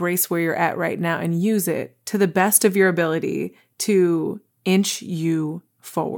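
No technical faults occur in this speech at any point.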